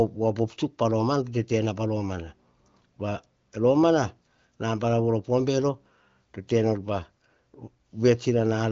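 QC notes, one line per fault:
No faults; wideband speech tops out near 7.1 kHz.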